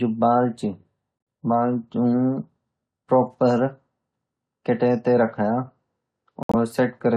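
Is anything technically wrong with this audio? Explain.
Yes. The speech has two corrupt frame muted dropouts, at 1.18 to 1.27 s and 6.43 to 6.55 s. The decoder rejected damaged compressed frames, and silence replaced them. Each hole starts abruptly. Its length fits several lost frames. Timing stays intact.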